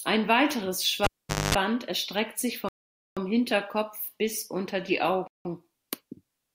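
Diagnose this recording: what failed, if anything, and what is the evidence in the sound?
The failure is in the analogue wiring: a cable was pulled and plugged in at 1.04 s. A pop opens the gap, and the speech drops to near silence for about 455 ms. A 50 Hz mains buzz lasting about 230 ms follows, as the plug's tip touches before the connector seats fully. A second pop at 1.55 s brings the sound back. That pop-buzz-pop signature separates it from a digital dropout, which would leave clean silence with no hum.

Two Bluetooth stalls occur in the playback link. The first is at 2.69 s, right after "erstreckt sich", where the speech stops dead for 482 ms until 3.17 s. The second is at 5.27 s, after "bis unter die", with a 176 ms gap. The likely cause is wireless interference delaying packets until the headphone buffer ran empty. Unlike the cable fault, these gaps are pure silence with no pops or buzz, and the speech resumes cleanly.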